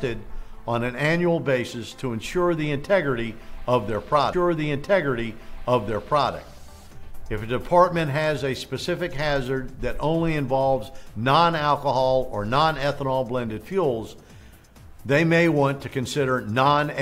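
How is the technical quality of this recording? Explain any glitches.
One glitch stands out: a stream segment repeated. From 4.32 s to 6.32 s, about two seconds of the programme play a second time, announced by a small blip where the audio jumps back to material already heard. The repeat adds roughly 2.0 s to the running time. It arises when the player fetches or queues the same chunk of the stream twice, then plays both copies in sequence without noticing the duplicate.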